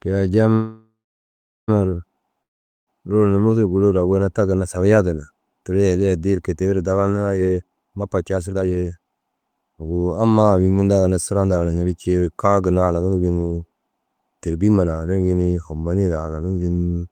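A call audio freeze runs from 0.53 to 1.70 s. Packets were likely held up, so the last sound fades into 0.75 s of silence, then the speech resumes intact but later.

A long network dropout from 2.43 to 2.89 s likely lost about 0.44 s of speech outright. A brief fading tail gives way to silence, and the speech returns with that part missing.

A jitter buffer speed-up from 7.40 to 9.93 s plays the speech at 145% speed with unchanged pitch. Repeated removal of short pitch-period slices trims about a second, so it sounds hurried.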